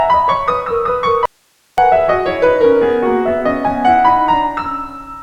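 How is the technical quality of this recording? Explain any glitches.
The music breaks off abruptly at 1.26 s and returns just as suddenly at 1.78 s, leaving a gap of about 0.52 s. That gap is an audio dropout to a faint residue. It holds only a thin bed of hiss, roughly 40 dB below the music, rather than true silence. The likely cause is a momentary loss of the wanted signal while the downstream path stayed live, so its own noise floor carried through the break. The hard edges on both sides set it apart from any musical pause or fade.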